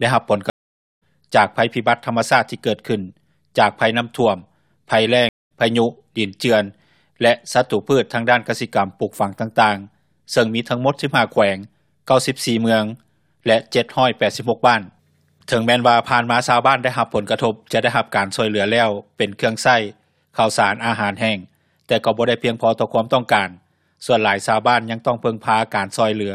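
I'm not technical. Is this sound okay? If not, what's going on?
No. Two stream reconnects occur: the connection dropped, went silent, and restarted later in the sound, at 0.5–1.03 s (skipping about half a second) and 5.29–5.51 s (skipping about a fifth of a second).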